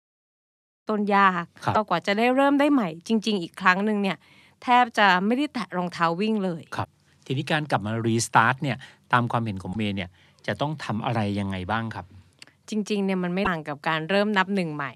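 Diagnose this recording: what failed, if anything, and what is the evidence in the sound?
The compressed stream failed, with damaged data in a compressed stream causing brief glitches at 1.71–1.76, 6.81–6.86, 9.71–9.76 and 13.42–13.47 s, each about 50 ms. The decoder misreads corrupted frames and resyncs. Spectrograms show short vertical broadband smears, and waveforms show abrupt discontinuities.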